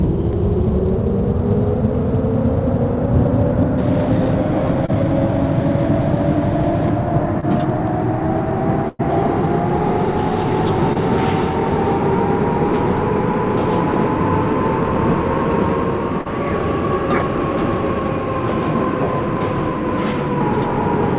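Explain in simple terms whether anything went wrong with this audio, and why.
Yes, a few things went wrong. At 4.86, 7.40, 10.93 and 16.21 seconds there are brief smears or wobbles. This is short concealed packet loss: 20 to 40 ms of audio arrived too late, and the receiver patched each gap by stretching the sound just before it.

From 8.88 to 9.01 seconds the sound turns into a held buzz or fading hiss, then jumps ahead. This is a burst of packet loss: about a tenth of a second went missing, and the receiver filled it with a fading continuation of the previous sound.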